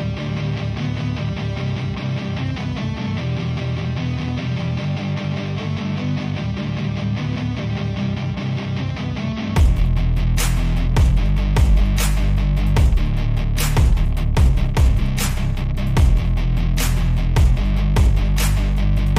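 No faults are audible anywhere in the recording.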